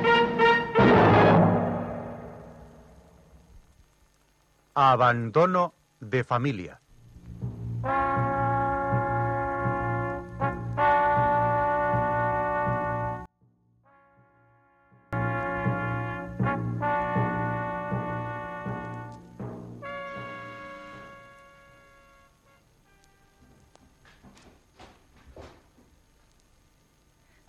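The sound collapses between 13.26 and 15.13 s. For that stretch of nearly two seconds, the level falls by about 32 dB. What remains is a faint trace rather than the full signal. The likely cause is one channel inverted, meaning one stereo side has its polarity reversed. When the two sides are summed to mono, everything common to both cancels. Only the small difference between the channels survives, which is why so little is left.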